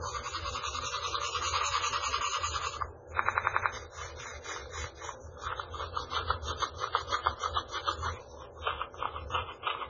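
A recording of everyday sounds carries heavy damage throughout that is likely MP3 compression at a very low bitrate, around 16 kbps. Nothing remains above 7.2 kHz, but unlike a plain low-pass filter the remaining band is unstable: weak frequency components drop in and out from frame to frame, giving a watery, swirling texture and metallic chirps on bright transients, with attacks smeared rather than crisp. From 3.25 to 3.72 s a system hang loop takes over. The same 92.9 ms slice of audio, which fits a 4096-sample buffer, repeats exactly five times, producing a machine-gun stutter at about 10.8 Hz while roughly half a second of the real sound is lost. What separates this from an ordinary dropout or glitch is that nothing goes silent and nothing varies: each repeat is an identical copy of one buffer, replayed while the system froze.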